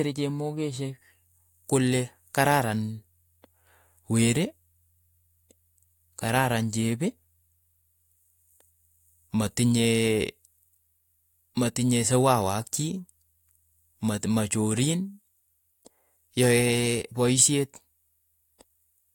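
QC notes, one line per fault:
Nothing to flag on this speech recording; no faults turned up anywhere in it.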